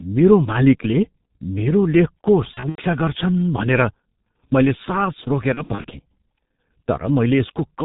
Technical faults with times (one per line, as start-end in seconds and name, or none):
0.00-7.84 G.723.1 codec
2.54-2.83 VoIP packet loss concealed by the speech codec
5.54-5.86 VoIP packet loss concealed by the speech codec